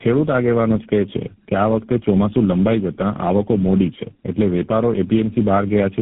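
From start to finish the speech sounds rough, muffled and warbly, with nothing above about 3.8 kHz. That points to tandem speech coding. The call appears to have passed through about four speech coders in a row, with the first and last sounding like GSM full rate. At every border it was decoded and coded again, so each stage worked on the previous stage's already damaged output and the distortions piled up.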